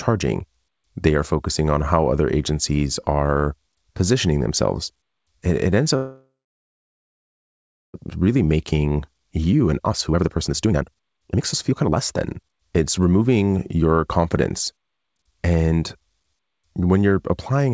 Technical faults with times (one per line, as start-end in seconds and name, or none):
5.96-7.96 call audio freeze
8.21-13.98 jitter buffer speed-up